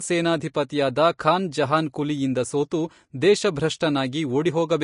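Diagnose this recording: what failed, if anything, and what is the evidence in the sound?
Codec stage, likely Vorbis compression. The speech is hissy and grainy throughout, with plainly audible damage. Nothing remains above 10.5 kHz. The treble residue has been quantised so coarsely that fine detail turns to noise, which fits a bitrate around 35 kbps.

Pre-echo at 0.69 s. An attack there is preceded by a short hiss lasting about 11 ms and sounds smeared. The transform block spread quantisation noise sized for the loud onset back into the quiet moment before it.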